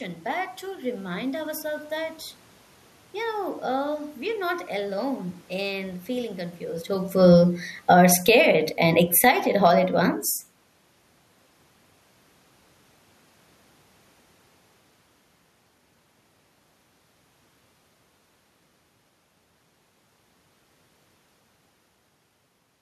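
After "alone in feeling confused", from 7.09 to 9.4 s, automatic gain falling pulls the level down about 10 dB, speech and background sinking together, a smooth downward envelope on the waveform before "all at once".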